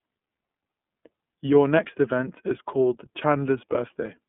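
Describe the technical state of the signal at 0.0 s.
At 0.0 s the speech already sounds thin and slightly rough, with a synthetic, buzzy edge. There is no air or sibilant sparkle above about 3.7 kHz, and the usable band runs roughly from 150 Hz to 3.5 kHz. This is iLBC codec damage, present throughout the clip. The codec rebuilds each short frame's excitation on its own, which fits 30 ms frames at a 13.33 kbps mode. That independent coding leaves a plainly audible graininess on top of the narrowband limit.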